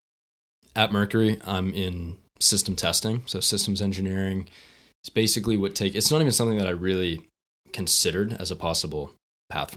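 Nothing is technically wrong with this speech recording.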